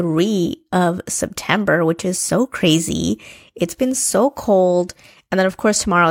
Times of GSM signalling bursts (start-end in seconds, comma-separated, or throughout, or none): none